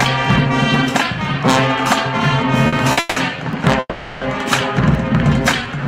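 Throughout the clip, a gain stage is overdriven by about 12 dB, so it cannot pass the peaks and flattens them. This is hard clipping. Only a small fraction of the waveform is cut, but each flattened top adds high harmonics, heard as a harsh crackle on every loud moment.

From 0.25 s to the end, something blocks the USB bus or audio driver every 0.5 s, and a sliver of audio is dropped and replaced with silence. These periodic USB or driver dropouts sound as evenly spaced ticks, audible only while sound is playing.

At 2.67–2.74 s and again at 2.92–2.99 s, a packet arrives late and the jitter buffer runs dry. The receiver holds the last sound for about 50 ms until the packet arrives. Each short stall from a late packet is heard as a brief buzzy smear, with nothing lost.

Right after the second stall, 2.99–3.18 s, the audio halts for 170 ms. Again from 3.80 to 4.24 s it halts for 420 ms, the last 30 ms dropping to silence. 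During each halt the final sound continues as a fading buzz, and then playback resumes where it stopped. The likely cause is packets held up in transit, giving a call audio freeze.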